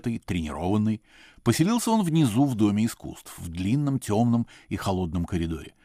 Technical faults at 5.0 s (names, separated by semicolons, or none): none